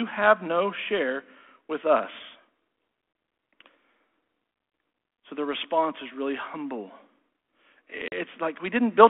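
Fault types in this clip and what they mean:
Packet loss on an ADPCM call: at 8.08 s, about 40 ms (roughly two packets) drops to silence, a hard-edged gap in the waveform and a blank stripe on the spectrogram. The decoder's predictor, now out of step, brings sound back near 8.15 s slightly distorted.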